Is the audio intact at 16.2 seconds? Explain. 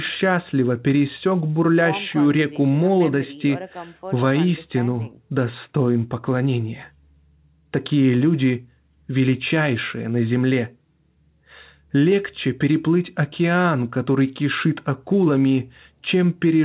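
Yes, the audio is intact at 16.2 seconds, with the speech coming through the call path's narrowband codec and nothing above about 4 kHz.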